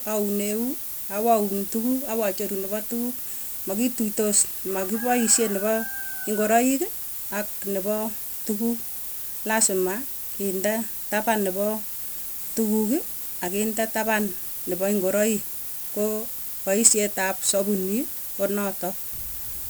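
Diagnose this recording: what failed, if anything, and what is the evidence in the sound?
The fault is in sample-format conversion: low bit depth with noise shaping. A thin, steady hiss runs through the whole speech clip. It climbs sharply toward the top of the band and sits nearly as loud as the speech. The hiss points to a reduction to about 6 bits. The rounding error was pushed upward in frequency.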